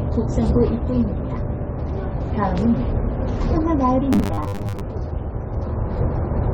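The whole clip sounds dull and a bit smeared, with a plainly audible fizzy, warbly texture on sustained parts. That's AAC compression, likely at a low bitrate, roughly 32 kbps AAC-LC, where the encoder drops the top band and thins out what's left.

From 4.13 to 4.81 s the sound turns into a rigid, metallic buzz at 100 Hz. That's the robotic sound from repeated short buffers. Playback kept replaying a snippet, which fits a 10 ms buffer, while about half the real audio was skipped, most likely because data arrived too slowly.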